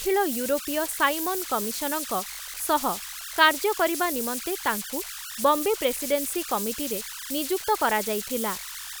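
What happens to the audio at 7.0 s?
Converter idle tones are present at 7.0 s, as they are throughout the speech. An undithered delta-sigma converter settles into repeating bit patterns on low-level input, producing a whistle around 1.5 kHz and grainy noise sitting only about 8 dB below the signal.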